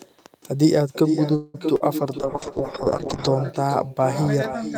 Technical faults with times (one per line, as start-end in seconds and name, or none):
0.00-4.77 echo with no canceller
1.35-1.56 call audio freeze
1.76-1.82 short concealed packet loss
2.20-3.34 call bitrate drop